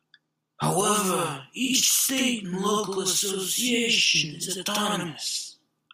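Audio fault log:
0.81–5.93 s channel delay (doubling): One channel lags by 85.33 ms, which fits a 4096-sample buffer. Summed to mono, the late copy doubles the speech as an equal-level slap echo.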